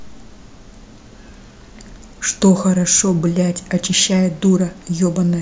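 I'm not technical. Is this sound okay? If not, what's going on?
Yes, nothing wrong is audible in this speech recording.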